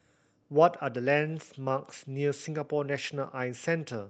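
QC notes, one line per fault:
No faults to note in this speech.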